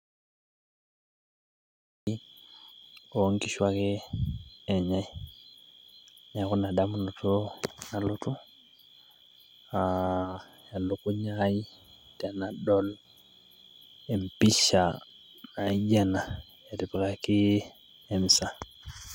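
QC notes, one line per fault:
0.00–2.07 s, audio dropout to silence: the speech clip opens already in a dead gap, silence with no room tone, and sound begins abruptly at 2.07 s, likely from a lost input link. The waveform is a flat line and the spectrogram empty black until then.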